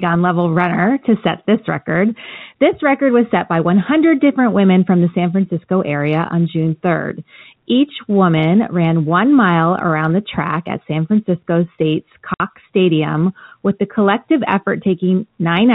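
At 12.34 s the speech drops out completely for about 60 ms, until 12.40 s. This is packet loss filled with silence. Audio packets never arrived, and the receiver played digital silence instead of rebuilding the missing stretch. The gap length fits three lost 20 ms packets. The cut is abrupt at both ends. Around the hole, the G.711 telephone coding keeps its narrow band, with nothing above 4 kHz.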